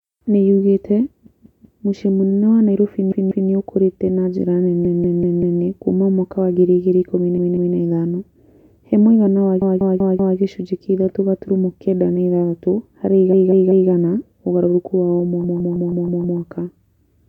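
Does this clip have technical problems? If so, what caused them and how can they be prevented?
Yes. Repeated frames break up this speech at 1.26–1.84 s, 3.12–3.50 s, 4.85–5.62 s, 7.38–7.76 s, 9.62–10.38 s, 13.33–13.90 s and 15.44–16.40 s. Each time, a short block of about 192 ms (160 ms in the last) replays two to six extra times, giving a mechanical stutter. The pattern suggests a run of compressed frames was written or sent more than once. The clip grows by up to 0.96 s per event. To prevent it, deduplicate frames by sequence number or timestamp before decoding.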